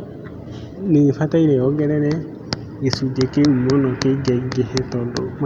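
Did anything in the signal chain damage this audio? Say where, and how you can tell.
No, nothing damaged it.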